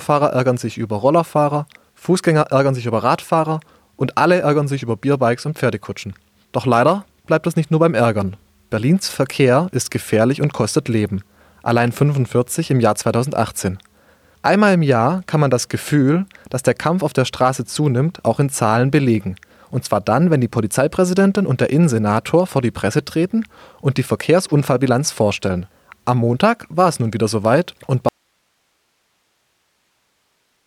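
At 28.09 s the speech cuts out abruptly and never returns. This is an audio dropout to a faint residue. What remains until the end of the clip is hiss, roughly 50 dB below the speech level. There is no fade and no natural pause. The signal simply vanishes mid-flow. The steady hiss shows the path after the break stayed live. The likely cause is a lost input or source, with only the downstream noise still running.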